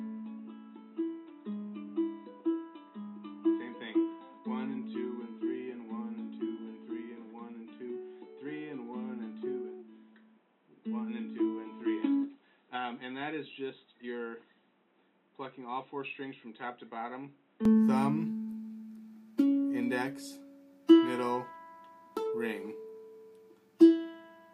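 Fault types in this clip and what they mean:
Input switched to a poorer device: the system likely recorded through a narrower-band input until 17.65 s, then changed to a fuller one. Before that, nothing reaches above 3.9 kHz, level sits roughly 5 dB lower with its own noise about 35 dB down, and no gap marks the switch.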